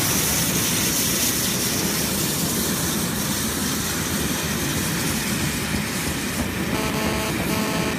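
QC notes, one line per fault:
6.75–7.94 s: GSM phone buzz. A hard, raspy buzz enters near the end, pulsing at about 217 Hz with a dense stack of harmonics and no relation to the underlying sound. It sits only about 4 dB below the programme level, so it is plainly audible. The cause is a nearby 2G handset transmitting in bursts. The audio circuitry rectifies each radio pulse into a click train, and the intermittent onset fits a data transfer rather than a call.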